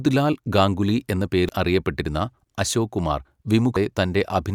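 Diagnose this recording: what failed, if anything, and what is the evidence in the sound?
The failure is at the codec stage: damaged data in a compressed stream. Two very brief blips, each only a few milliseconds long, break into the speech at 1.49 s and 3.76 s. At those points the decoder met corrupted bytes, misread the affected frames and had to resynchronise on the next valid frame header.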